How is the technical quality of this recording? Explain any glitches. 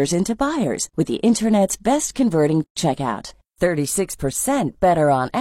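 The recording has one glitch, a short dropout in the middle of the speech.

From 2.64 to 2.77 s, just after "best converting", there is a gap at a join of encoded pieces: a gap of about 125 ms, with the truly silent part somewhat shorter because the codec smears its edges. The audio was encoded in separate segments and spliced untrimmed, so the encoder's start-up delay and the padded final frame both remain as dead air. It sounds like a brief hiccup before the speech resumes exactly where it stopped. A waveform shows a flat stretch with smeared edges, and a spectrogram shows a clean vertical band of nothing across all frequencies.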